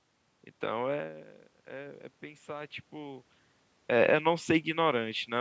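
From 0.92 to 3.33 s, automatic gain rising: after the level at the microphone falls by about 15 dB, the gain control slowly lifts its gain by about 5 dB. Unlike a talker moving closer, voice and room noise swell together over those seconds.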